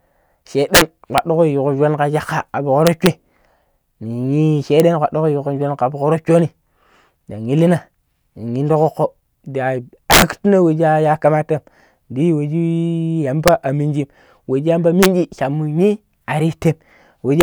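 Integer overflow cracks the speech at 0.75–0.81, 1.18, 2.87–3.07, 4.8, 10.11–10.22, 13.48, 15.03–15.06 and 17.41–17.43 s. Loud peaks, driven up to about 8 dB past full scale, wrap to the opposite sign instead of limiting, giving violent snaps far harsher than clipping.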